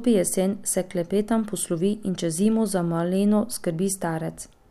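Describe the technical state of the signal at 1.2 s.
At 1.2 s the speech signal is intact, with no audible dropout, clipping, glitch or other fault at that moment.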